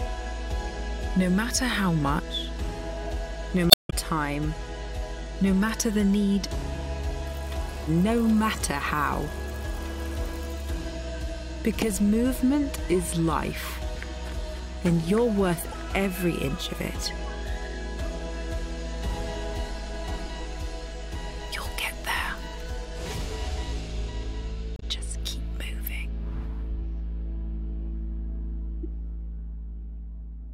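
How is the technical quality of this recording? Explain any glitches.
Damaged data in the compressed stream causes four audible glitches, at 3.67–3.93 s, 15.72–15.74 s, 24.76–24.83 s and 28.83–28.86 s. At each point some bytes of the encoded stream are corrupt, so the decoder misreads or rejects those frames, loses sync and hunts for the next valid frame header. The result is a brief chirp or blip breaking into the sound. The first is the longest at about a quarter of a second. The others last only a few hundredths of a second.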